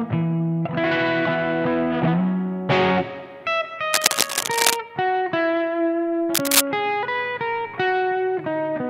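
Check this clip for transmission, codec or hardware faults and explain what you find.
Two bursts of cable scratch noise, from 3.93 to 4.77 s and from 6.34 to 6.61 s. The cause is likely a worn cable, connector or control being moved, so its contact resistance jumps erratically. Each burst is a scratchy rustle: the first about as loud as the sound, the second roughly 5 dB above it. On a spectrogram it shows as dense, ragged broadband smears; on a waveform, as irregular noisy spikes.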